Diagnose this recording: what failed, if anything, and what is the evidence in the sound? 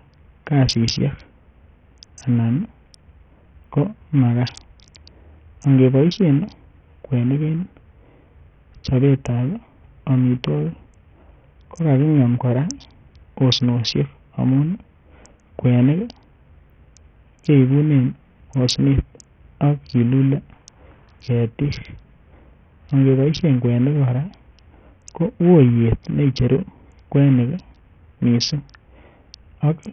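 Codec stage. Throughout the speech nothing reaches above about 9.1 kHz, the upper band flickers, and gritty noise with aliasing rides on it. This is likely Bluetooth SBC compression at a small bit pool, consistent with roughly 48 kbps, starving the top sub-bands.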